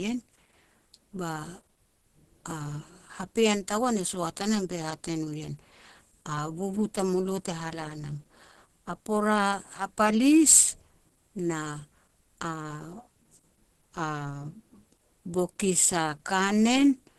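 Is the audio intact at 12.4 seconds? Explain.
No. At 12.4 seconds, as throughout the clip, the speech sounds muffled, hoarse and grainy, with nothing above about 12.1 kHz. This is likely Opus compression in its hybrid speech mode, which fits a low rate near 16 kbps.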